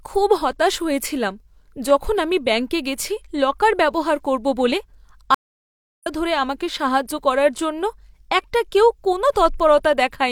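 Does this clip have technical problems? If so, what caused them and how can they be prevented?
Yes. A stream reconnect runs from 5.34 to 6.07 s: the connection dropped, leaving about 675 ms of silence, then the player reconnected and restarted its decoder mid-stream. The speech resumes roughly 0.7 s further on, so that stretch is lost. Larger client buffering with automatic retry would help prevent this.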